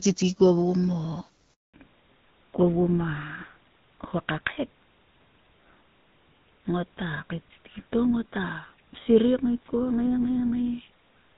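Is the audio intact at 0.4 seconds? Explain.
Yes, the audio is intact at 0.4 seconds, with no fault at that moment, and the speech there comes through the AMR wideband (HD Voice) codec at 12.65 kbit/s with only the light coding character expected at that rate.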